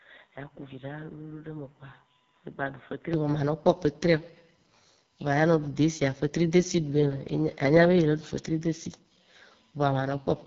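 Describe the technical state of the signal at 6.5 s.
At 6.5 s, as through the whole clip, a faint steady USB whine sits at 1 kHz, roughly 45 dB below the speech. It comes from the bus drawing current in 1 ms frames and leaking into the power or ground. Unlike mains hum, its fixed pitch is a clean 1 kHz tone, not a 50 or 60 Hz buzz.

The speech is also heavily damaged by the AMR wideband (HD Voice) codec. It sounds rough and raspy, which fits the lowest 6.6 kbit/s mode, and nothing reaches above 7.2 kHz. The codec models the vocal tract from pulses and fills the top band with shaped noise. That gives grainy texture rather than the swirling, watery artefacts of music codecs.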